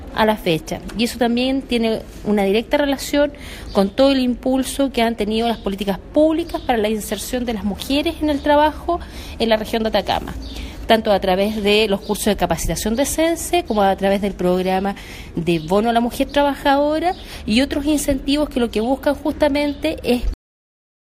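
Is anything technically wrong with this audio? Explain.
Yes. At 20.34 s the clip has a cut-off end. The final buffers never played, so sound stops abruptly mid-event into digital silence, without decay.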